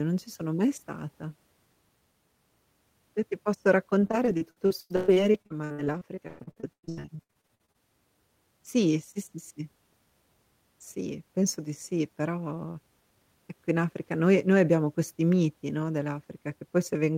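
Repeated packet loss (robotic sound) runs from 3.99 to 7.76 s, just after "ti posso". Dozens of short dropouts, the longest 120 ms, are each patched by stretching the preceding sound, covering about 39% of the stretch and leaving the speech choppy.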